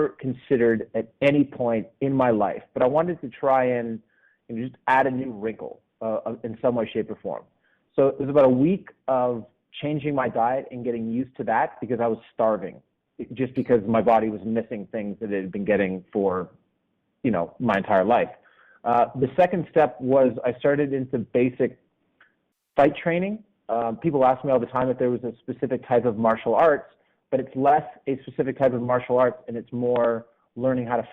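No technical faults can be heard anywhere in this audio.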